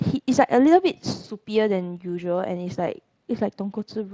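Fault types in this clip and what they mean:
Nothing stood out on listening to this speech clip.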